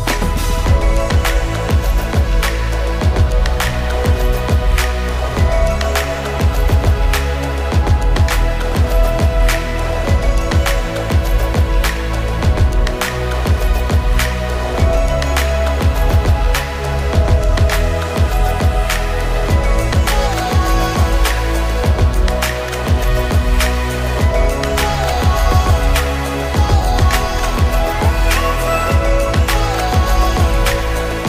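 No technical faults can be heard anywhere in the clip.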